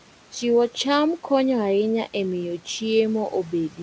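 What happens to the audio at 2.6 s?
At 2.6 s, as across the whole clip, noise suppressor artifacts are present. The suppressor pulls bands it judges to be steady noise down by about 12 dB, so the residual room noise dips in gaps and returns under speech.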